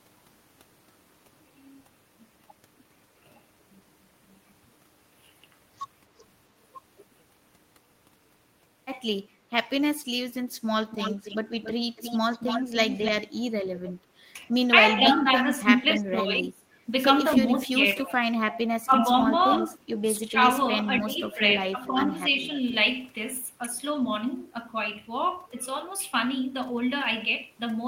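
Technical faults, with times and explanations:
10.91 to 21.92 s, echo leak: a delayed copy of the speech comes back at 10.91 to 13.11 s, about 283 ms behind and about 10 dB under the talker. Brief scraps recur at 15.07 s (283 ms, about 5 dB down), 20.97 s and 21.86 s (300 ms, about 20 dB down). This is likely an echo canceller on a loudspeaker end letting its own playback through. Room reverberation blurs into a smooth tail, but here the copy is a distinct repeat at a fixed lag of roughly 0.3 s.
14.59 to 14.64 s, short stall from a late packet: for a moment the sound is held rather than moving forward. The receiver's jitter buffer ran dry while a packet was late, so it stretched the last 16 ms and then resumed where it left off. No sound is missing, and everything after plays 16 ms later. That sets it apart from packet loss, where a piece is gone or replaced by a smeared, robotic fill.
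14.95 to 22.39 s, speech suppressed in double talk: the talker's level ducks in pieces. The drop reaches about 25 dB between 14.95 and 16.64 s, affecting roughly a second. Shallower dips of about 15 dB follow at 17.38 to 18.33 s (about half a second), 18.86 to 19.04 s, and 20.03 to 22.39 s (about 0.7 s in total). These are likely an echo canceller turning down both sides while both talk. Unlike a stall, the sound is attenuated rather than held.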